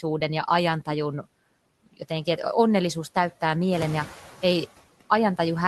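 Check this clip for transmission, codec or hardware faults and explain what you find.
One fault is present, running through the whole clip. The call path's top end stops near 12 kHz, which fits Opus at around 20 kbps.

Noise suppressor artifacts, throughout: the suppressor treats steady background in each band as noise and pulls it down frame by frame, by about 16 dB. The background sinks in the pauses and swells back under the speech, even as the room noise climbs around 3.5 s.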